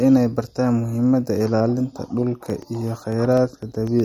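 Right from the start, the speech has that watery, swirly edge you get from MP3 compression, and the highs stop dead at 18.8 kHz. The encoder is likely starved of bits, which fits a low bitrate around 50 kbps, so weak detail flickers in and out.

From 2.50 s to 4.00 s there are periodic USB or driver dropouts: every 0.125 s, roughly a millisecond of audio is replaced by silence, about fifteen times in all. Something is stalling the audio path on a fixed cycle, and you hear a steady run of little ticks over the speech.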